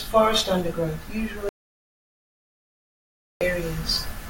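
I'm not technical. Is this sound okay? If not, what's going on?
No. At 1.49 seconds the speech cuts off abruptly, and nothing comes back until 3.41 seconds, so almost two seconds are missing. This is an audio dropout to silence. Unlike a natural pause, which keeps a faint background hum, this gap is totally dead, with no room sound at all, and it starts and stops sharply. The recording likely lost its input for that stretch, and whatever was said then is gone.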